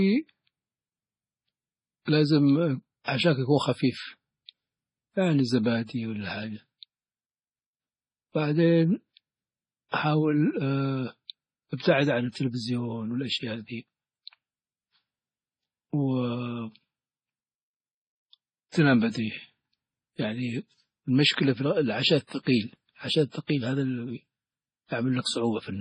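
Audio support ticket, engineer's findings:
Speech band-limited throughout, nothing above 10.5 kHz. Two distinct layers of coding artefacts audible together. Likely transcoding between lossy codecs: sound fits a low-rate MP3 re-encoded to low-rate AAC-LC. Second encoder spends bits on the first's artefacts, adding its own.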